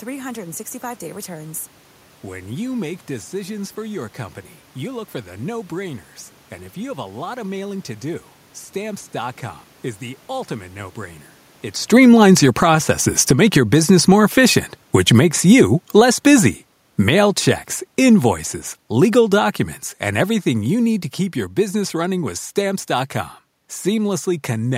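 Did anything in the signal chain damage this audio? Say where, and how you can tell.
Yes. Automatic gain falling, a call-processing fault, lowers the level from 11.81 to 17.27 s by about 10 dB, and again from 18.92 to 21.06 s by about 4 dB. On the waveform the envelope tapers smoothly, and the spectrogram's room-noise floor darkens along with the speech.

Automatic gain rising, also in call processing, works against that first fall from 12.69 to 14.86 s, pushing the level up by about 7 dB. The voice and background swell together over two seconds, which shows as a broad brightening across every frequency band, unlike the talker's move near 11.5 s.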